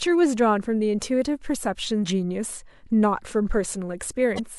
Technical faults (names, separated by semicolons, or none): damaged data in a compressed stream